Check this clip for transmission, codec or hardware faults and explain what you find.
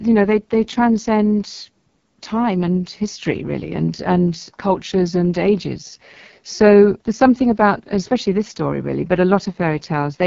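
The whole clip runs through the AMR wideband (HD Voice) codec, with heavy codec damage. It models speech as pulses through a vocal tract filter, so the speech turns rough and raspy, which fits one of its lowest rates, around 6.6 kbit/s. Nothing sits above 7.3 kHz.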